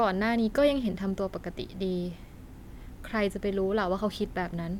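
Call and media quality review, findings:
Nothing to flag on this speech recording, no faults turned up anywhere in it.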